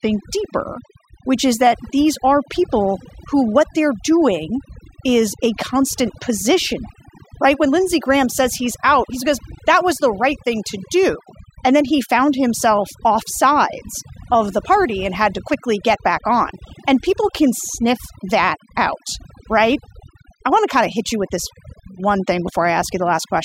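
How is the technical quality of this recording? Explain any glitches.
The recording is marred by overdone noise removal across its whole length. A noise reduction stage was pushed too hard, so any frequency band close to its noise estimate gets pulled far down or cut entirely, taking the quieter parts of the speech along with the noise. Pauses fall to near silence dotted with twinkling specks. On a spectrogram the background shows as scattered isolated blips on a dark field, and the speech harmonics look patchy and holed.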